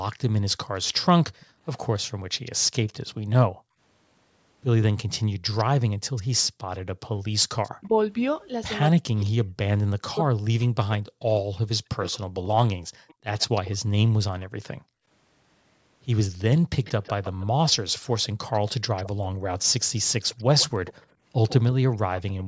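From 1.4 to 3.15 s a faint, delayed copy of the speech trails the original by about 141 ms, sitting far down, roughly 25 dB under the direct sound. This is echo leak, most likely from a far end playing the call on a loudspeaker whose echo canceller let part of the microphone pickup slip through and return. The same shadow comes back from 4.82 to 7.88 s and, with the delay now about 143 ms, from 12.08 to 13.7 s, a little louder at about 20 dB down. From 16.84 to 22.44 s it is louder still, about 15 dB down, with the delay still about 143 ms.

Overlapping the first echo, between 2.14 and 3.79 s, the room sound sinks by as much as about 40 dB for around half a second in total before it comes back. This is background gated by the echo canceller: while the loudspeaker was playing, the canceller pulled the microphone down hard, and it released only when playback eased. A shorter dip of the same kind falls between 14.81 and 15.07 s.

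From 7.79 to 13.21 s the speech itself dips and breaks up in pieces, losing up to about 40 dB in the deepest moments, with about two seconds affected across the stretch. This is speech suppressed in double talk. Both ends were likely talking at once, and the canceller, unable to tell its own talker from the loudspeaker echo, turned both down.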